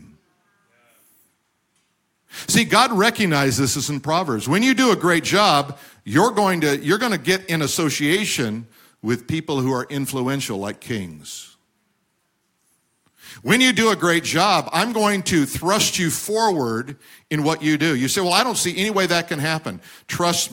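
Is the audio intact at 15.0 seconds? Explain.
Yes, the audio is intact at 15.0 seconds, with no fault at that moment.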